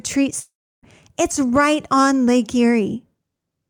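At 0.39 s the speech suddenly smears into a fading buzz and then drops to near silence for about 330 ms before picking up again at 0.85 s. There's no jump back to catch up: roughly 440 ms of the talking is simply gone. That's most likely a long network dropout. Audio stopped arriving, the receiver stretched the last bit of sound until it decayed away, and playback resumed past the lost stretch.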